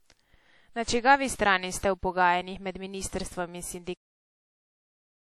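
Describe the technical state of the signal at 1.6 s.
At 1.6 s the speech carries WMA compression damage that runs through the whole clip. It is most likely from a transform codec at a low rate, consistent with roughly 48 kbps. Coarse quantisation smears noise across long blocks, giving a ringing, washy quality and a hiss that swells and fades with the speech. On a spectrogram, weak high-frequency detail appears in blocky patches with empty gaps.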